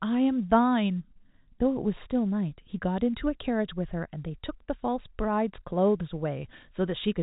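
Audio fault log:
No faults heard in this speech clip.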